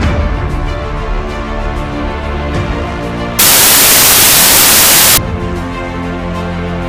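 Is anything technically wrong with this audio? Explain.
Yes. From 3.39 to 5.17 s the sound turns into loud, harsh broadband noise: samples built from the wrong bytes, with each sample's bytes misassembled so the rapidly changing low bits dominate.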